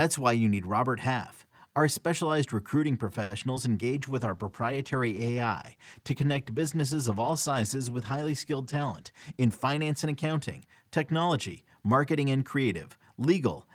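At 3.23 s a short stall from a late packet holds the sound for about 70 ms, to 3.32 s, before it resumes exactly where it stopped. Nothing is lost, only delayed, so a steady stretched tone is heard, not a gap or a jump.

Two short concealed packet losses follow, at 3.40 to 3.43 s and 3.55 to 3.58 s. Each drops 20 ms of real audio, and 10 ms of filler continues the last sound. Unlike the stall, material is actually missing, so these come across as tiny smears or wobbles rather than a hold.

A call bitrate drop starts at 3.95 s, with the encoder going from 64 to 17 kbps. It stays at the lowest rate for about 5.4 s and recovers by 10.88 s. The whole stretch turns rough and dull as coarser coding sets in and the low rate cuts off the top end. This is a sustained change in timbre, not a brief glitch.

Inside that stretch, from 9.11 to 10.06 s, a jitter buffer speed-up trims pitch-period slices, roughly 70 ms in total. 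The speech plays at about 107% speed with its pitch unchanged, so it sounds slightly hurried rather than higher.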